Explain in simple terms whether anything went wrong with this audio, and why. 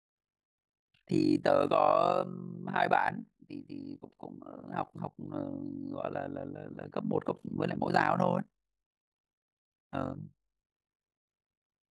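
Something did go wrong, and it lasts the whole speech clip. The fault is overlap-add ripple. The sound was chopped into short overlapping pieces and rejoined unevenly. So the loudness dips deeply about fifty times a second, giving a harsh, buzzy, robotic flutter.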